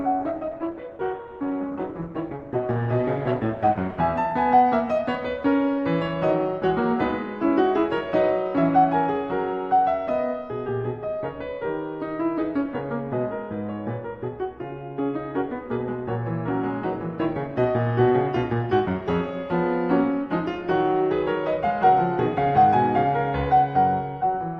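Adaptive stream starting at a low bitrate, 0.0 to 4.0 s: the player began on a low-quality rendition to start quickly, so the music sounds dull and artefact-heavy, fitting Opus at 16 kbit/s. At 4.0 s it jumps, with no gap, to a fuller sound fitting 64 kbit/s.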